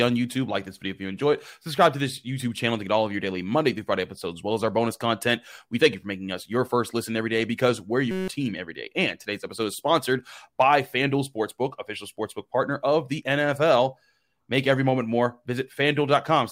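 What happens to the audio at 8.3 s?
From 8.11 to 8.28 s the speech gives way to a system hang loop. The machine stalled while the sound hardware kept replaying one 5.33 ms slice, which fits a 256-sample buffer. It repeats as a steady 188 Hz buzz, and about 150 ms of audio is lost.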